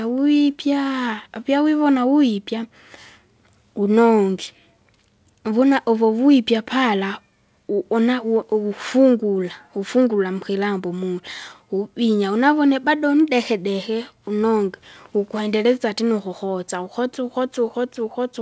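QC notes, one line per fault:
Nothing to flag here, just speech that has come through a call codec, with the top end stopping at 8 kHz as that path does.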